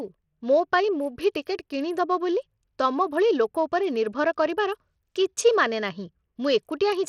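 From start to finish the speech carries plainly audible Bluetooth SBC compression, likely from a link running a small bit pool, which fits a rate near 80 kbps. The treble thins out and flickers, and a gritty noise and aliasing ride on the sound. A spectrogram shows the upper bands breaking into patchy, blocky fragments that switch on and off, while the waveform looks intact and the damage shows only in the spectrum.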